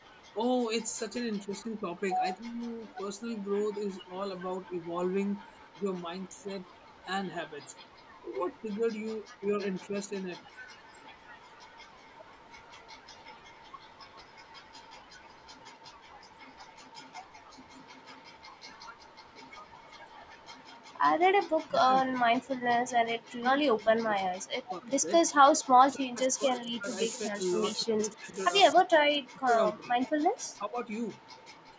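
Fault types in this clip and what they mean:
Speech suppressed in double talk: at 1.47–4.79 s, near 6.3 s, 8.62–10.48 s and 21.59–30.88 s the speech dips, by about 10 dB early on and up to about 40 dB late, cutting out in pieces. The likely cause is an echo canceller turning down both sides while they overlapped.
Echo leak: at 5.46–8.6 s, 27.13–27.84 s and 30.35–31.45 s a faint copy of the speech trails 258 ms behind, about 25 to 35 dB below it. This is likely loudspeaker sound reaching the far microphone and slipping past its echo canceller.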